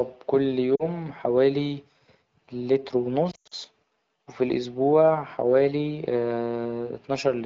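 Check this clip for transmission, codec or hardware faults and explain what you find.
The clip has lost AMR speech frames twice. At 0.75 to 0.88 s, about 40 ms is missing, which fits two frames. At 3.31 to 3.54 s, about 160 ms drops out in patches over 200 ms, with the longest gap 100 ms. Radio errors corrupt the frames, so the decoder repeats the last good pitch and vocal tract settings at falling gain. The first gap is a short dip. The second smears, fades quickly in this wideband stream, and returns rough.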